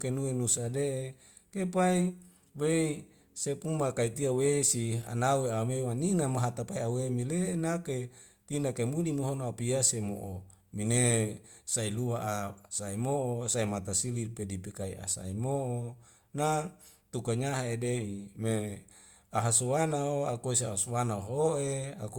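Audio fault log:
Throughout: low-bitrate audio saved at a high bitrate. The speech keeps earlier coding damage, likely from a roughly 48 kbit/s Opus pass before high-bitrate MP3. Nothing above 20.1 kHz.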